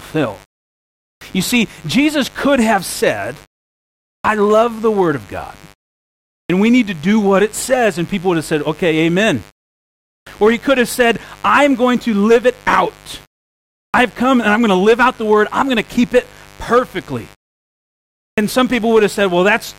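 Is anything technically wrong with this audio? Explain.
Yes. A mains buzz at 50 Hz runs throughout, roughly 30 dB below the speech. Sharp switching spikes push harmonics into the kilohertz range, so it rasps rather than hums.

A clipped start after a pause occurs at 1.16, 4.19, 6.44, 10.21, 13.89 and 18.32 s. After pauses of 0.71 to 1.05 s, the output device wakes late and swallows the first 50 to 56 ms. These onsets lose their first sounds.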